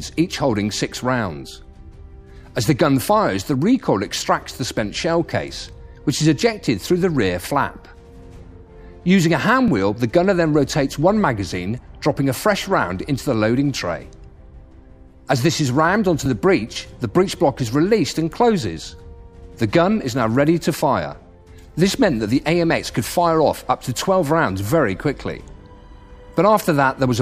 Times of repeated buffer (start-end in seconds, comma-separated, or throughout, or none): 9.68, 16.26